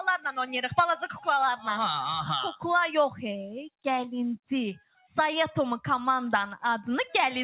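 A noise suppressor applied to music or sounds stays active throughout. Tuned for speech, it treats steady tones, ambience and decaying tails as noise and turns them down, so the level swings by roughly 5 dB and the sound pumps and thins as sustained parts sink while attacks pass.

The sound is cut by the noise suppressor from 1.03 to 1.26 s, sinking by up to about 9 dB over roughly 150 ms. The same happens from 4.79 to 5.11 s, where the drop reaches about 15 dB over roughly 300 ms. In both spans, steady or fading sound is held down or its decay cut short.

Through the call path, nothing is heard above 4 kHz, which fits G.711 mu-law coding.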